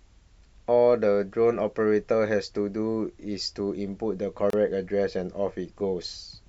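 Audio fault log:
4.50–4.53 s: gap at a join of encoded pieces. The speech drops into a gap of about 30 ms with smeared edges, then resumes where it stopped.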